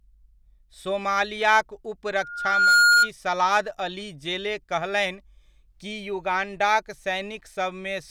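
A single piercing tone near 1.4 kHz swells over roughly half a second from 2.21 s and holds until 3.09 s, ending well above the speech level. This is loudspeaker feedback squeal: the microphone picked up its own loudspeaker, and the loop gain at that frequency exceeded one.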